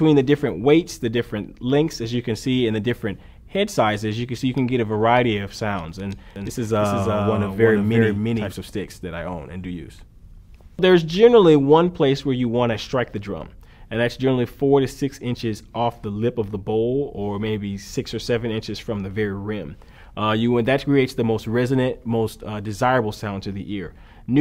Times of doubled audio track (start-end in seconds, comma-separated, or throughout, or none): 6.36-8.52